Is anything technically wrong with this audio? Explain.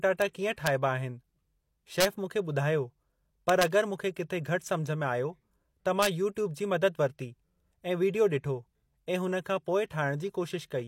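Yes. The speech carries integer overflow at five points: 0.22 s, 0.67 s, 2.01 to 2.05 s, 3.49 to 3.63 s, and 6.02 to 6.06 s. At each, the signal exceeded the largest value the integer format could hold by about 0 to 2 dB, and instead of being held at the limit it wrapped around to the opposite extreme. Each peak that crosses over jumps across the full range, so these moments sound like sharp cracks, far more abrupt than ordinary clipping.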